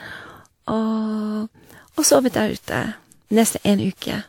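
From start to finish the speech sounds swirly, smeared and hollow, with blurred attacks and nothing above 18.4 kHz. The likely cause is generation loss: around five lossy passes, fitting WMA at 96 kbit/s, each adding fresh quantisation noise and spectral holes.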